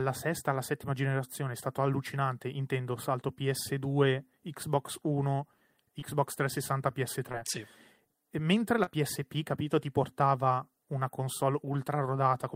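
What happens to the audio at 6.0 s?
At about 5.99 to 6.04 s there is a short concealed packet loss: roughly 20 ms of the speech arrived too late to decode, and the receiver covered the gap with about 22 ms of extrapolated sound before crossfading back. It is heard as a brief smear or wobble. On a spectrogram, harmonics run on unnaturally flat or blur into noise across that sliver.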